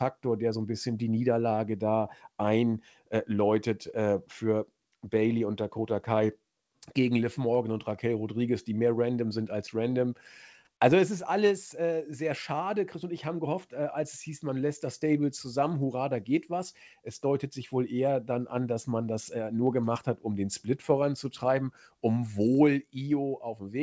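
No faults in this speech clip; the band stops at 8 kHz, consistent with a wideband call codec such as G.722 on the call path.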